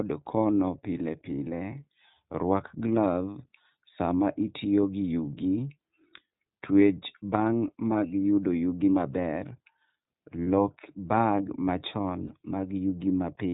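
iLBC codec coding runs through the whole speech clip. The codec codes the excitation of each frame on its own, without relying on the frame before, and nothing above 4 kHz survives, so the voice sounds narrowband, slightly rough and synthetic, with the coding damage plainly audible. The frame structure and texture fit iLBC's 13.33 kbps mode with 30 ms frames, the coarser of its two settings.

Lost iLBC frames cause two short dropouts, from 10.44 to 10.47 s and from 12.27 to 12.31 s, each about 30 ms long, which fits a single lost frame apiece. In each gap the decoder concealed the missing audio by repeating the last pitch cycle blended with noise, which sounds like a brief held, faintly buzzy vowel. Because each iLBC frame stands alone, the voice recovers cleanly right after each gap.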